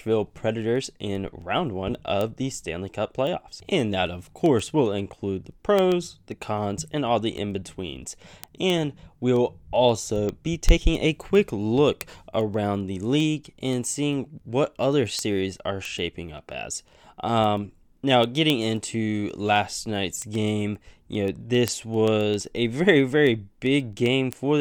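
From 0.23 to 24.59 s, word clock ticks: an unlocked receiving clock slips one sample roughly every 0.15 s, producing sharp ticks of uneven strength at a steady rate.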